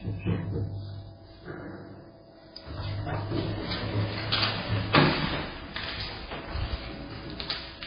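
It's a recording of everyday sounds, and the whole thing is dull and watery. Nothing comes through above 5 kHz, and the quieter detail swirls in and out with a metallic, chirpy edge on anything sharp. Transients sound smeared too. All of that points to heavy MP3 compression as the likely cause, with an encoder starved down to something like 16 kbps, where it chops the treble and keeps dropping weak frequency lines from frame to frame. Then from 5.20 to 6.39 s you get a loudspeaker feedback squeal: a single tone at 5.2 kHz that swells up over roughly 0.7 s and ends up sitting around 5 dB above the rest of the sound. That's a mic catching the speaker it's feeding, with the loop gain tipping past one at that one frequency so it builds on itself, then holds until it stops at 6.39 s.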